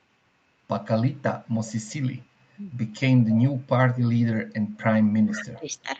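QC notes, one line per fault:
1.65–1.73 s, 1.89–1.95 s, 3.29–3.58 s and 5.36–5.42 s, echo leak: faint delayed copies of the speech come back 138 ms late, about 20 to 35 dB down, likely residual loudspeaker pickup the echo canceller missed. On a spectrogram, weak repeated harmonic patterns appear shifted 138 ms later.
5.23–5.77 s, speech suppressed in double talk: the talker's level dips in patches, up to about 20 dB, over roughly 0.4 s, while echo also leaks through, likely the canceller attenuating its own talker along with the loudspeaker echo. On the waveform, the envelope shows notched, choppy gaps.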